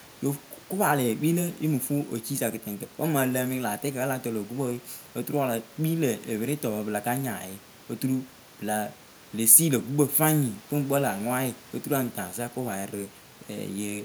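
There are no technical faults to describe at any point in this speech, only the room's own background noise sitting about 27 dB below the talker.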